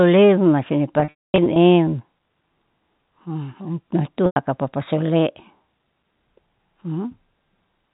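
Packet loss with pitch repetition at 1.0–1.56 s and 4.26–4.36 s: repeated pitch periods give a buzzy hold, seen as frozen harmonic stripes fading out.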